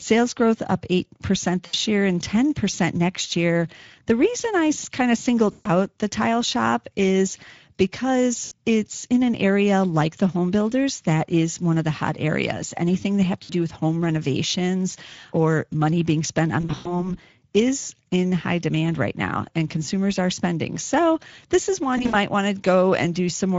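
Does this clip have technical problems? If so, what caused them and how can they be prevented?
Yes. The whole clip carries plainly audible Speex codec damage. This CELP speech codec models the voice with a limited excitation budget, which fits a rate around 16.8 kbps, and anything above 8 kHz is only synthesized noise-like fill. Prevention: use a modern codec such as Opus at an adequate bitrate.

VoIP packet loss concealed by the speech codec occurs at 1.65–1.75 s, 5.51–5.68 s, and 13.43–13.53 s. It also occurs at 8.45–8.52 s, between "tile shop is because" and "it's in an area". It occurs again at 16.61–17.12 s, after "or money being spent" and before "is in high demand", with 180 ms missing across 240 ms. The last is at 21.97–22.29 s, after "this is". The decoder extends its last pitch and filter with falling gain, producing buzzy or noisy fill, and recovery lags after packets resume. 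Prevention: improve network stability and enable jitter buffering or forward error correction.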